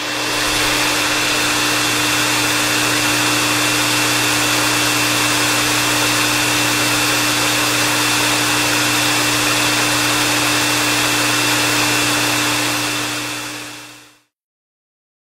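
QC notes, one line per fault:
No faults were found in this recording of sounds. There is nothing to log for it.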